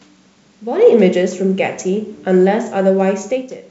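Nothing stood out as a technical fault on listening to this speech.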